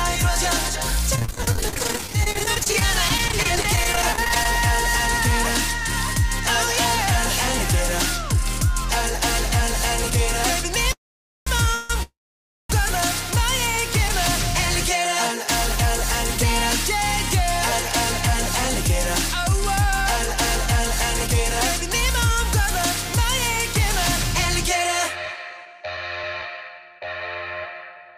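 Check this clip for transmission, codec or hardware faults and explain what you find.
Three kinds of transmission fault show up: repeated packet loss early on, a cluster of call audio freezes near the middle, and a jitter buffer speed-up near the end.

Repeated packet loss (robotic sound) runs from 1.15 to 4.45 s. Dozens of short holes follow one another, the longest about 42 ms. Each is patched by stretching the previous sound forward. About a quarter of that span is concealed this way, and roughly 0.65 s of real audio is lost. The result is choppy, with pieces dropping out.

Call audio freezes occur at 10.92–11.48 s, 11.75–11.91 s and 12.03–12.70 s. The first and third stretch the last sound briefly, then drop to silence for about 0.49 s and 0.56 s. The middle one, 0.15 s long, is a short held buzz or hiss with no silence. The likely cause is delayed packets draining the jitter buffer. 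When the audio resumes, it picks up where it stopped. Nothing is lost, but each pause adds delay.

A jitter buffer speed-up runs from 25.15 to 26.58 s. The receiver held more audio than it wanted. To catch up, it cut many tiny pitch-period slices, about a tenth of a second in total. Playback runs about 7% fast. The pitch stays the same, but the sound feels hurried.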